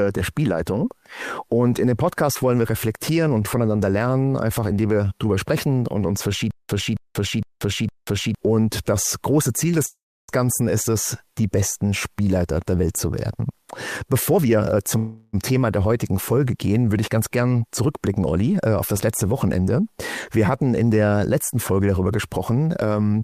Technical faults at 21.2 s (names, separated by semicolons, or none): none